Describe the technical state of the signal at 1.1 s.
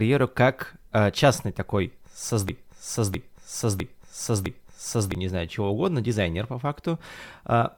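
At 1.1 s the speech signal is intact, with no technical fault present at that moment.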